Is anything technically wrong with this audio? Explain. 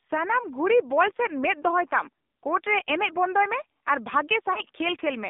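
Yes, there are two faults. Throughout, the speech sounds boxed-in and buzzy, with a synthetic edge plainly audible and nothing below about 250 Hz or above 3.7 kHz. This is the AMR narrowband mobile codec, which rebuilds the voice from a vocal-tract model and sparse pulses at a low rate, which fits roughly 7.4 kbps.

From 4.54 to 4.59 s there is a brief dip and warble in the speech. This points to lost AMR speech frames, most likely a single 20 ms frame: the decoder filled the gap by repeating the last good pitch and vocal-tract settings at reduced gain.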